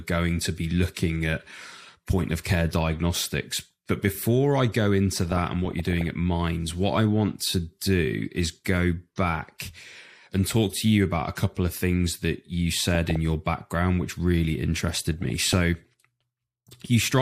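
DAB burbling hits at 5.12–6.08 s after "before I go", 12.95–13.16 s after "of things that you", and 14.94–15.58 s after "your background which really". Uncorrected bit errors corrupt MP2 samples and scale factors, so single sub-bands jump in level, giving short blips of noise over the speech.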